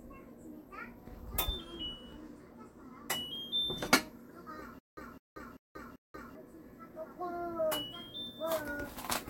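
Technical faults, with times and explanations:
4.79 to 6.35 s, stutter with silent gaps: a burst of about 208 ms repeats four times, each followed by about 182 ms of digital silence, every 390 ms. The likely cause is a stalled stream replaying its last fragment at each retry. Audio meant for that span is lost.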